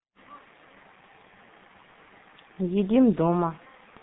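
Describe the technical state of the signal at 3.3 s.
At 3.3 s the speech carries G.723.1 codec damage, present across the whole clip. The sound is confined to roughly 150 Hz to 3.7 kHz, and heavy coarse frame coding makes it muffled and hoarse, with smeared consonants. That roughness, which fits a bitrate near 6 kbit/s, separates it from clean band-limiting alone.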